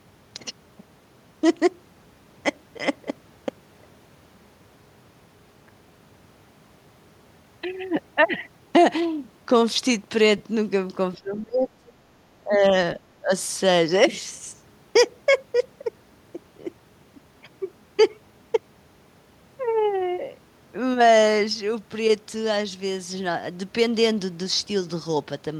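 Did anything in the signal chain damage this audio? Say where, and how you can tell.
Yes. At the codec stage, lost LE Audio frames cause a brief noisy smear from 10.38 to 10.40 s. That fits two 10 ms LC3 frames lost over Bluetooth, concealed by the decoder reusing the last spectrum with random signs.

In call processing, the speech dips at 11.15 to 11.94 s, 12.45 to 12.74 s and 12.96 to 13.31 s, the worst by roughly 25 dB. This is likely speech suppressed in double talk by an echo canceller.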